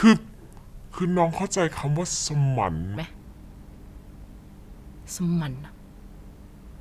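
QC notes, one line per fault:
0.00–2.97 s, wrong sample rate: the speech comes out slowed to about two-thirds speed and dropped about 7 semitones, so it sounds low, heavy and dragged until normal playback resumes at 2.97 s. The ratio fits 48 kHz material played back at 32 kHz with no conversion. Speed and pitch fall together by the same ratio, which sets it apart from a pitch-shift, where timing holds, or a time-stretch, where pitch holds.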